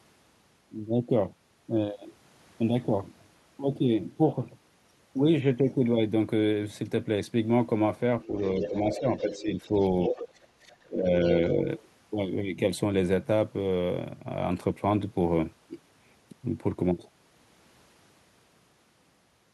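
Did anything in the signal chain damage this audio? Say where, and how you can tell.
Yes, in the call-processing stage, where the echo canceller likely failed. The other side's voice leaking through appears from 8.22 to 9.69 s at about 10 dB below the talker, and again from 10.04 to 10.28 s at about 5 dB below. The far-end audio played from the loudspeaker reached the microphone and was not fully subtracted. On a spectrogram, a second set of harmonic traces overlaps the main one there.

Speech suppressed in double talk runs from 8.27 to 11.09 s, overlapping the leak, with a short recurrence from 11.40 to 11.58 s. With both sides active at once, the canceller likely could not tell the talker from the echo and pulled gain down on everything. The deepest cut is roughly 20 dB, spread over about one and a half seconds in pieces. The later dip is only about 5 dB and brief. The waveform shows the envelope collapsing in chunks, and the spectrogram shows the upper bands thinning or blanking out.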